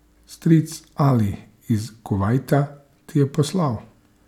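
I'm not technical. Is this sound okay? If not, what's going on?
Yes, this one's fine: nothing in the recording sounds broken or glitchy, so there's nothing here to worry about.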